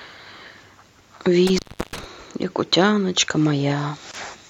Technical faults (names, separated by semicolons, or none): intermittent contact; gap at a join of encoded pieces